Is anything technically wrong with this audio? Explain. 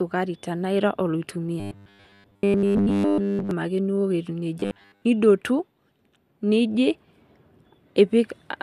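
Yes. From 1.60 to 3.51 s, ending just before "ake ning'ua etiu", and again from 4.60 to 5.05 s, the speech has robotic sound from repeated short buffers. Playback is likely starved, so a 10 ms chunk keeps looping while most of the real audio is skipped. This forces a rigid metallic buzz at 100 Hz. Unlike a steady mains hum, the buzz still roughly follows the words.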